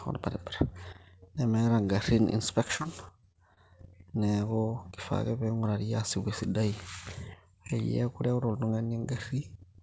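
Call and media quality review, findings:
Repeated packet loss (robotic sound), 2.68–3.59 s: choppy speech with eight short holes, the longest 29 ms, each filled by extending the preceding audio; probable jitter buffer and loss concealment. Spectrogram: smeared, repeating frames and abrupt breaks. Waveform: copied cycles between gaps. Band stops at 8 kHz, consistent with wideband G.722.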